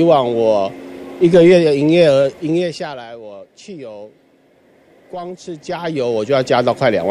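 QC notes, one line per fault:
2.38–3.10 s and 5.42–6.50 s, zipper noise: the level drops around 20 dB, then rises around 20 dB, in audible steps of roughly 1 dB and then well under 1 dB, at about fifty per second. Each unsmoothed jump clicks, giving a ticking buzz. The waveform shows a staircase envelope, and the spectrogram shows regularly spaced vertical broadband lines.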